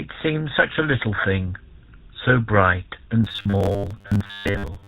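It's a speech clip, and the whole thing has that buzzy, gravelly GSM full-rate codec sound, which fits the 13 kbps GSM full rate coder. It models the vocal tract and drives it with a sparse pulse excitation, so everything above 4 kHz is gone and the roughness is plainly audible. Around 1.16 to 1.19 s there's a short lost GSM frame, about 20 ms. The decoder just reused the last good frame's settings, so you get a brief metallic ring instead of a gap. Then from about 3.24 s to the end at 4.88 s the voice turns into a rigid robotic buzz at 100 Hz, likely from repeated short buffers. That rate suggests roughly 10 ms chunks being replayed while most of the real audio is skipped, so only the rough shape of the speech survives.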